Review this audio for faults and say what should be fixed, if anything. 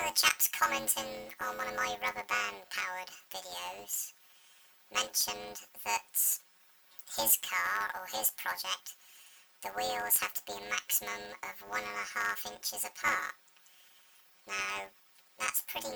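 Planar audio read as interleaved runs throughout. Each 10.88 ms block of separate channels is read as alternating pairs, producing a robotic buzz at 91.9 Hz. Make the reader honour the planar sample layout, or interleave the channels before playback.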